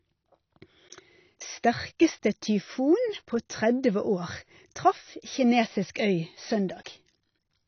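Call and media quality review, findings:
Dull, smeared speech throughout, nothing above 6.5 kHz; warbling, fizzy sibilants. Likely AAC compression (AAC-LC), consistent with about 24 kbps: coarse quantisation empties spectral bands. Plain low-pass filtering would dull without the warble.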